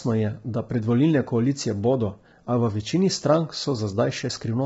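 Throughout, the speech sounds rough and grainy, with nothing above 7.7 kHz. That's likely low-delay AAC compression, heavy enough to suggest something near 16 kbps.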